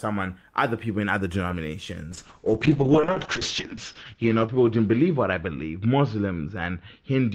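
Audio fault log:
2.12–7.35 s, call bitrate drop: the audio turns coarse and watery, fitting an encoder squeezed from around 32 kbps to about 7 kbps for roughly 1.9 s. On a spectrogram, content above 8 kHz vanishes, down from a 20 kHz ceiling.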